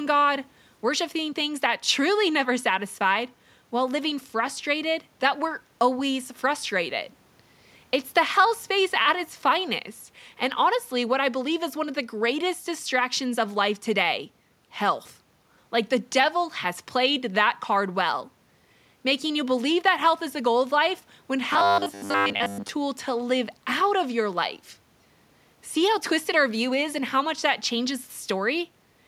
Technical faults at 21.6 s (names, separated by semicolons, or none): robotic sound from repeated short buffers